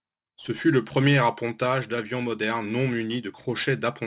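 Throughout, sibilants sound gritty and metallic against a hard 4 kHz edge. This is aliasing: unfiltered high frequencies folded back, roughly 20 dB below the speech, during downsampling.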